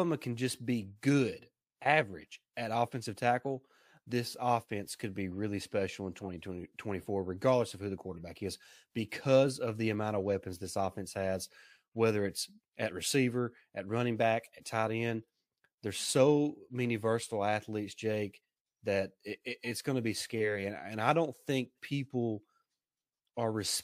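Speech with two corrupt frames decoded: a short burst of stray noise from 6.17 to 6.26 s, right after "be really special in", spanning a couple of frames, and a fainter single-frame blip at 8.17 s, just after "regardless of who the". Flipped bits made the decoder put energy where it doesn't belong.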